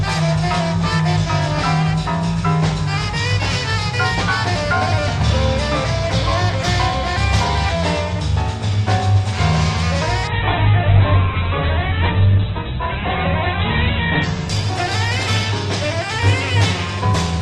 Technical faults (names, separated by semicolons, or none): call bitrate drop